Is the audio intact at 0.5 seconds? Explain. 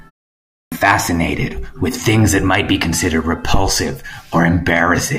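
No. At 0.5 seconds the speech sits inside a clipped start after a pause, spanning 0.40 to 0.72 s. After about 0.38 s of silence the output device had gone idle and needed roughly 0.32 s to wake and lock again, so the opening of the speech is swallowed and it bursts in abruptly, missing its first sounds. On a waveform the trace stays flat through that span and then jumps straight into the speech; a spectrogram shows a blank gap ending in a hard vertical onset with no gradual build-up.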